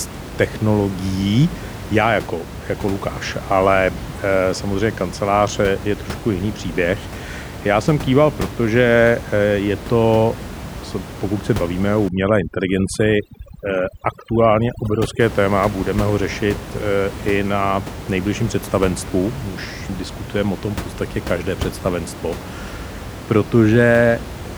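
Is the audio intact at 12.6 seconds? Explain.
No. At 12.6 seconds the speech sits inside a stretch of overdone noise removal running from about 12.08 to 15.20 s, just after "pokud se bavíme o" and ending before "téma budeme ho řešit". The noise reducer is set so hard that any frequency band close to its noise estimate is pulled down or cut out. Quiet parts of the speech vanish along with the room noise, which elsewhere sits about 12 dB below the speech. The background drops and breaks up into twinkling, warbling specks. Unlike a dropout, the sound never stops outright.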